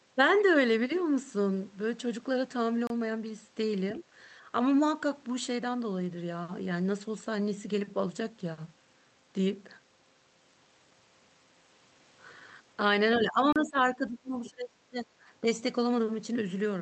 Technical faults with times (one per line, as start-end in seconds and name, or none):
2.87-2.90 block of digital silence
13.16-15.06 speech suppressed in double talk
13.53-13.56 block of digital silence
14.45-14.50 other side's voice leaking through
15.41-15.46 speech suppressed in double talk